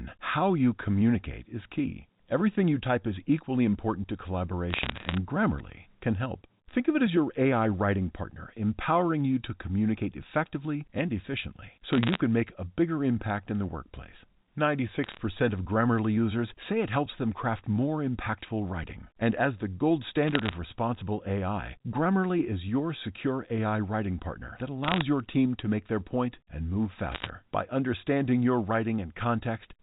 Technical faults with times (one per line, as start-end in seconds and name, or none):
4.70-5.17 bit errors on a digital phone line
11.93-12.21 bit errors on a digital phone line
15.04-15.18 bit errors on a digital phone line
20.28-20.55 bit errors on a digital phone line
24.84-25.02 bit errors on a digital phone line
27.12-27.29 bit errors on a digital phone line